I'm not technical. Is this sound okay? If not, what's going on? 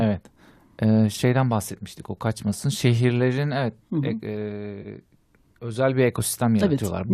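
No. AAC frame loss with concealment hits at 4.82 to 4.87 s: a brief smeared, noisy blip lasting 30 ms. A few packets of compressed audio went missing, likely about three frames, and the decoder filled the gap by guessing from the sound just before it.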